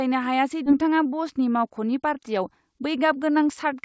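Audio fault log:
0.66–0.68 s, skip ahead: roughly 0.7 s of speech was discarded with no fill, so playback lurches forward and the two sides are butted together almost seamlessly.
0.82–2.44 s, jitter buffer speed-up: an overfull buffer trimmed short pitch-period pieces repeatedly, about 150 ms in all, so speech runs around 8% fast at unchanged pitch and sounds hurried.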